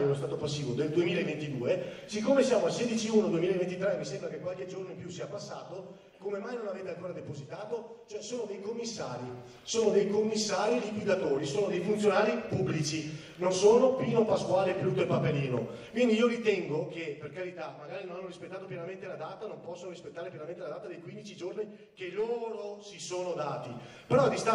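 No technical faults are audible.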